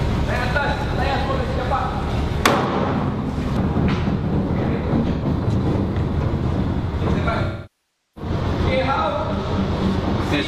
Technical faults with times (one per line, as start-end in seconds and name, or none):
5.13-5.25 AAC frame loss with concealment
7.43-8.31 AAC frame loss with concealment